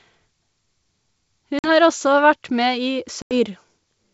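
Packet loss on an ADPCM call strikes at 1.59–1.71 s and 3.22–3.34 s, leaving hard-edged silent holes of 50 ms and 90 ms. Afterward, the decoder's predictor and step size lag the sender's, so the speech returns with brief, slight distortion.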